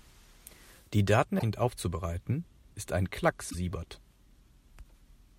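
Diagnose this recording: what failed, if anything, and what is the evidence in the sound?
Damaged data in a compressed stream, at the codec stage. Two short glitches break the speech: 1.36 to 1.43 s, just before "aufzubereiten ist ein", and 3.47 to 3.55 s, just after it. Corrupt bytes made the decoder misread frames and hunt for the next header.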